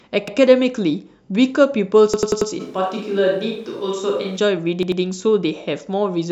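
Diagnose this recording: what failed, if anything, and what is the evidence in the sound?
Driver/buffer stage: a repeated buffer stutters at 0.28, 2.14 to 2.51 and 4.83 to 5.02 s, replaying one 93 ms chunk, which fits a 4096-sample buffer, with hard joins.

From 2.62 to 4.36 s the speech turns roomy and hollow, room noise about 30 dB under it, level unchanged, likely a switch to a distant microphone.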